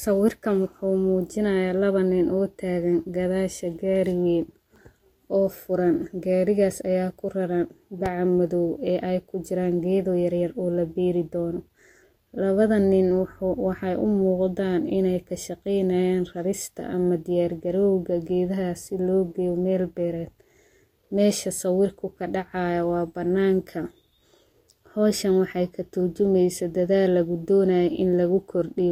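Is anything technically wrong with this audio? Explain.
Yes. At 8.06 to 8.08 s, just after "ayaa kuraran", a single loud pop jumps roughly ten decibels above the speech. It is likely a voltage spike from a plug, switch or static. Unlike a dropout click, the speech continues unbroken beneath the thump, with no gap.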